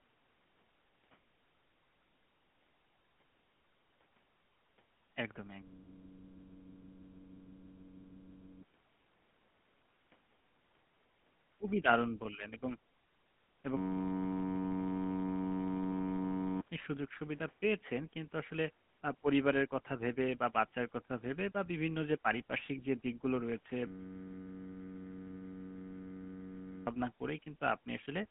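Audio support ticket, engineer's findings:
GSM full-rate codec, whole clip: speech squeezed through the original GSM coder, which models the vocal tract and drives it with a sparse, regularly spaced pulse excitation. Result: plainly audible buzzy, gravelly roughness, consistent with 13 kbps full rate. Band limited to roughly 150 Hz to 3.4 kHz, so nothing above that survives.

System hang loop, 5.63 to 8.63 s: host or driver froze while the audio hardware kept replaying one ring buffer. A 10.67 ms slice repeats about 281 times at 93.8 Hz, which fits a 512-sample buffer, heard as a steady buzz. About 3 s of real audio gone.

Second hang loop, 13.77 to 16.61 s: same freeze, same mechanism. The 10.67 ms slice cycles about 266 times at 93.8 Hz, giving the same buzz. Roughly 3 s of audio lost again, so this is a recurring stall.

Lost GSM frames, 5.84 s: a 20 ms gap where a bad frame was concealed by reusing the last good frame's parameters. 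Brief rough, metallic ring in place of the missing audio. Falls inside the first hang loop.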